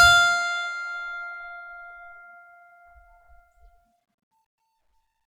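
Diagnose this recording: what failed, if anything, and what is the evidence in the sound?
Nothing in this music recording points to a failure at any stage of the chain. No path stands out in the sound as having broken down anywhere along the way.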